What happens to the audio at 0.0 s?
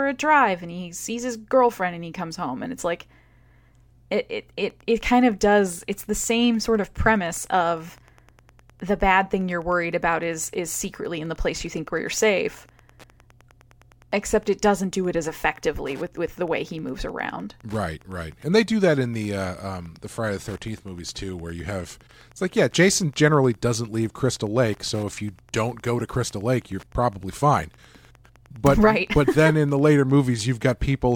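Nothing goes wrong at 0.0 s: the audio is intact, with no fault at that moment.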